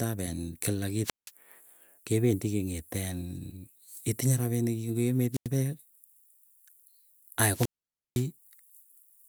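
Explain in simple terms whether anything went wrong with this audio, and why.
The speech briefly cuts out three times: around 1.03 to 1.31 seconds, 5.32 to 5.48 seconds, and 7.50 to 8.27 seconds. Each time, a short burst of hiss leads into near-silence, lasting about 0.17, 0.09 and then a full half-second, before the speech returns. This is a wireless microphone squelch dropout. The radio link from the microphone weakened, so the receiver muted its output rather than pass on the static.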